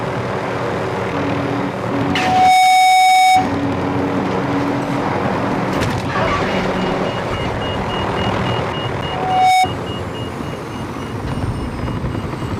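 Loudspeaker feedback squeal hits twice, 2.06–3.52 s and 9.08–9.67 s: a 745 Hz tone swelling over roughly half a second, about 10 dB above the sound, as the mic-to-speaker loop runs away.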